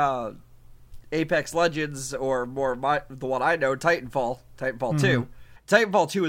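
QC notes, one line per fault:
5.55–5.57 s, damaged data in a compressed stream: a 20 ms fault where the decoder misread corrupt frames and lost sync, unlike a simple transmission dropout.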